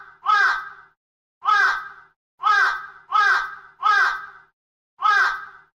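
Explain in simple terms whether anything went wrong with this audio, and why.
Nothing went wrong here.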